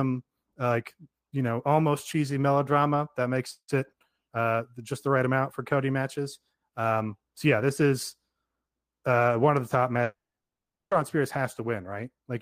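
Right after "one of the top", at 10.03 s, the speech smears into a short fading buzz, then goes quiet for about three quarters of a second before resuming at 10.93 s with roughly 0.9 s of speech gone. This is a long network dropout, likely packets stopped arriving, so the receiver stretched the last sound briefly, then fell to silence, and playback picked up later without restoring what was lost.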